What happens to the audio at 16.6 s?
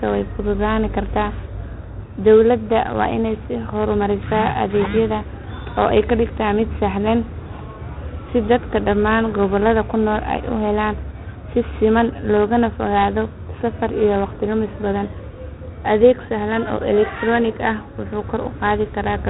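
At 16.6 s the speech carries the same 4-bit ADPCM compression heard across the whole clip. Each sample is coded as a coarse step from a predicted value, so quantisation error rides along as grainy hiss that swells with loud syllables, and sharp onsets smear where the step size lags. Heavy damage like this fits a rate near 32 kbps. A spectrogram shows a noise floor tracking the speech energy and nothing above 3.9 kHz.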